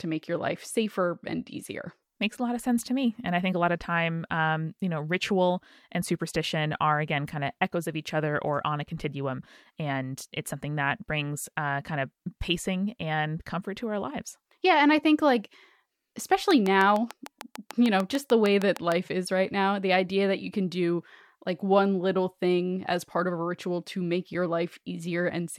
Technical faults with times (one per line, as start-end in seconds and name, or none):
16.51-18.93 train of clicks